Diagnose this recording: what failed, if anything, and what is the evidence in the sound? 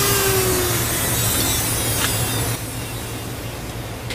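A sudden gain jump occurs at 2.55 s: the whole signal drops by about 5 dB in a single step and stays there until the clip ends. The stage is digital, most likely a gain setting applied in the driver or processing chain without a ramp. It is not a fade or a quieter source, because the background noise falls by the same amount at the same instant, with no gradual slope before or after the step.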